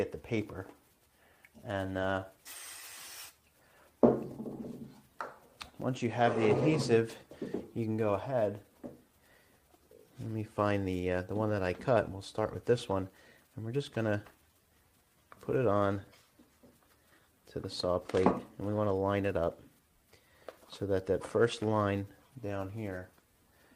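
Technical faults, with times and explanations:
No technical faults can be heard anywhere in the signal.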